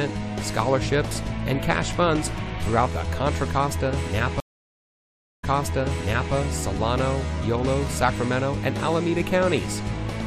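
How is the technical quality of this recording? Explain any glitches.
The recording has one clear glitch. From 4.40 to 6.34 s, a stream reconnect occurs: the connection dropped, and a fresh decoder restarted mid-stream, leaving 1.03 s of silence before audio resumes 0.91 s earlier, repeating material.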